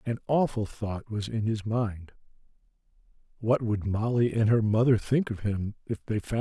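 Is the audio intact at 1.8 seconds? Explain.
Yes, the speech plays through intact at 1.8 seconds, with no fault at that moment.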